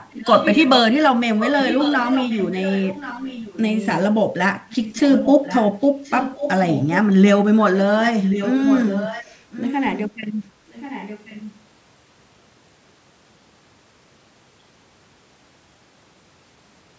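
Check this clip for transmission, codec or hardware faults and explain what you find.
One transmission fault stands out, a recurring echo.

Echo leak, at 0.1–0.81 s, 1.39–4.0 s, 4.7–5.65 s, 5.82–7.01 s, 8.07–10.11 s and 10.69–11.53 s: a delayed copy of the speech trails it by about 1.08 s. It sits roughly 10 dB below the voice, and the last instance is fainter at around 20 dB down. The likely cause is a far-end loudspeaker whose echo canceller let residual pickup return down the line. The band-limited call microphone path, with nothing above 8 kHz, carries this echo along with the speech.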